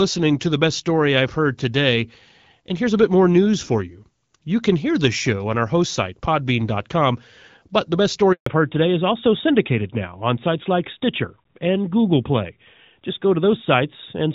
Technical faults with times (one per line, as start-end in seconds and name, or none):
8.32-8.46 handover gap
8.46-14.34 fallback to narrowband